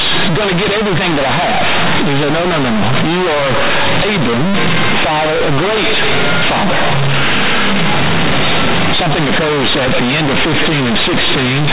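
Throughout the speech, companded audio is read as linear: mu-law bytes are played as plain 8-bit samples without expansion. Every sign change throws the output across about half its range, so quiet passages match loud ones, producing harsh, buzzy distortion and heavy noise in pauses, all within the 4 kHz limit of the telephone coding.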